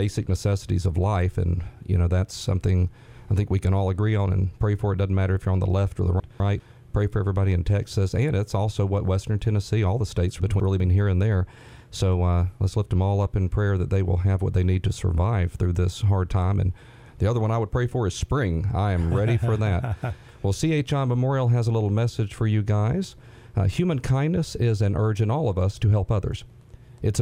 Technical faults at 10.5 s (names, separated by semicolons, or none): chunks out of order